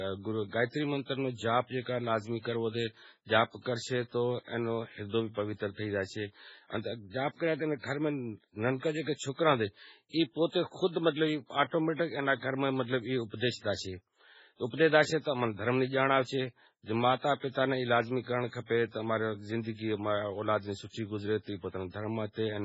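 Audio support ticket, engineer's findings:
Likely MP3 encoding at a starved bitrate, consistent with roughly 16 kbps: treble cut flat above 7.7 kHz, weak spectral lines dropping in and out, giving watery, swirly speech throughout.

Pre-echo from transform-block quantisation noise spreading ahead of sharp attacks: short hiss before onsets at 9.14 s (52 ms) and 11.95 s (43 ms), attacks sounding smeared.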